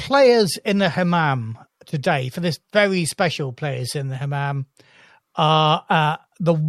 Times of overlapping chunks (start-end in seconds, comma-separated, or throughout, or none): none